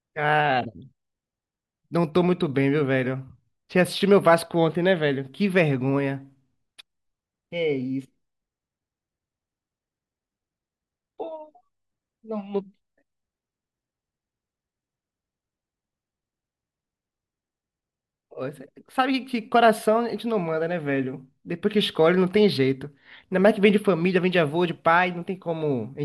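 Nothing goes wrong anywhere in this recording of speech, so there's no fault to walk through.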